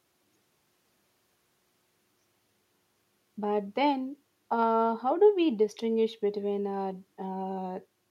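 No technical faults are audible.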